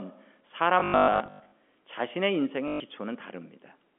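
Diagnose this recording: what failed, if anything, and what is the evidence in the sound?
Network: packet loss with last packet repeated. Robotic stutters at 0.8 to 1.52 s and 2.68 to 2.8 s. Repeats fill gaps; the buzz fits 20 ms packets.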